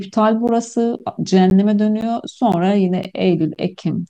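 Gap between chunks at 0.48, 0.99, 1.50, 2.01, 2.52, 3.04 and 3.55 s cuts this speech with hard-edged 12 ms silences, one after every 0.5 s chunk, as if each block is stored or played back with a brief empty stretch before the next begins.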